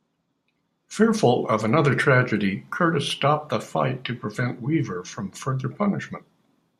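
No technical faults are audible.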